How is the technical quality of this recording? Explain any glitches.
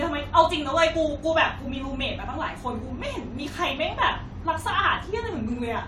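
No glitches can be heard anywhere in the recording, and there are no dropouts, clicks or timing faults to report.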